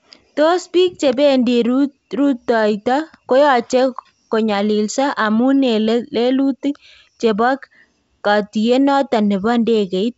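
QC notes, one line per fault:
No faults heard; the speech comes over the G.722 wideband telephone coding path at 64 kbit/s, with at most a faint upper-band hiss.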